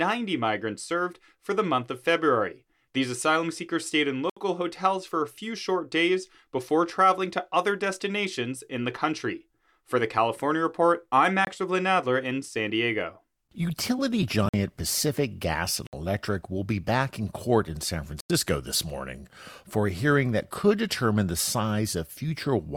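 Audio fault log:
4.30–4.37 s, 11.45–11.47 s, 14.49–14.54 s, 15.87–15.93 s, 18.20–18.30 s: block of digital silence. The output buffer was not filled in time, so the speech drops to zeros for 23 to 93 ms, which fits 1024-, 2048- and 4096-sample buffers. The cuts have no fade, and the longer gaps are heard as holes. The first falls after "asylum seekers stayed in", and the last comes before "this morning for a".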